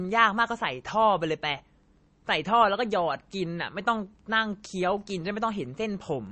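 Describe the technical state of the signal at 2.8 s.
At 2.8 s the speech carries a steady 43.1 Hz buzz from a filter restarted on every block, present across the whole clip. Each block starts from a cleared filter state, so a small transient lands at every block boundary. The rate fits a 1024-sample block. Unlike mains hum, whose level stays fixed, this buzz rises and falls with the speech and fades in the pauses, because each tick is a piece of the signal itself.

The same moment also has a watery, swirling quality. Nothing sounds above 8.3 kHz, and s sounds and consonant attacks come out smeared. The likely cause is heavy MP3 compression, and the damage points to a low bitrate of around 32 kbps. A plain low-pass filter would only dull the treble. Here the weak frequency components also flicker on and off from frame to frame, which produces the swirl and the metallic chirps on sibilants.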